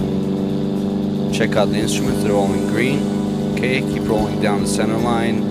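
No technical fault can be heard anywhere in the clip. Nothing in the sound points to a problem in how it was captured, processed or delivered.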